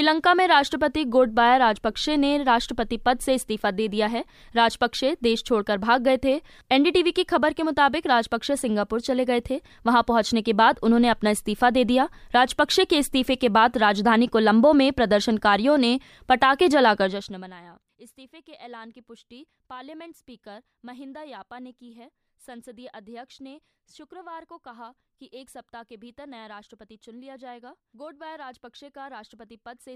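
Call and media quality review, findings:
Zipper noise, 17.01–17.57 s: ticking over the speech as level drops about 25 dB. Gain in the volume stage steps roughly a hundred times a second, unsmoothed.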